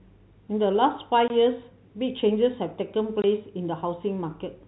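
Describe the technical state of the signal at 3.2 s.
At 3.22 s the speech drops out abruptly for 20 ms, ending at 3.24 s. This is packet loss filled with silence: a block of audio failed to arrive, and the receiver played silence in its place. The gap length fits a single 20 ms packet. The hard cut into and out of the hole is heard against the band-limited telephone sound of the G.711 coding, which cuts off above 4 kHz.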